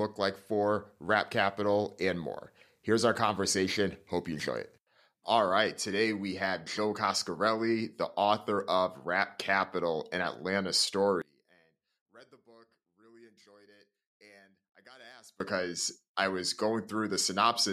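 From 11.22 s to 15.40 s the speech suddenly falls by about 29 dB and turns faint. The drop is most likely one channel inverted. One side of the stereo pair has its polarity flipped, so the content shared by both sides cancels when they are summed to mono. The centred speech nearly disappears. Only the small difference between the channels survives. That leaves a faint trace until normal level returns at 15.40 s.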